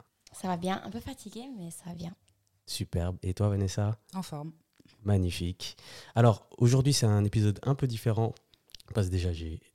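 No technical faults can be heard anywhere in this speech recording.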